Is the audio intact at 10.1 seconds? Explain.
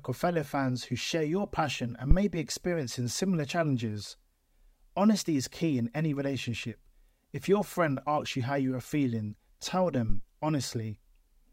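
No. A phantom power thump runs from 10.09 to 10.21 s. A supply voltage was switched on or off while the input was live, and that sudden DC step passed through the coupling capacitors into the signal path as a low-frequency transient. It sounds like a deep, dull thud, peaking at about -15 dBFS and dying away in roughly 25 ms, so it is brief and stays well below full scale.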